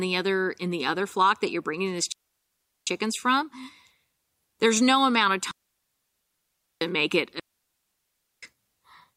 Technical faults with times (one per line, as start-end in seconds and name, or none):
2.12-2.87 digital wireless dropout
5.51-6.81 digital wireless dropout
7.39-8.43 digital wireless dropout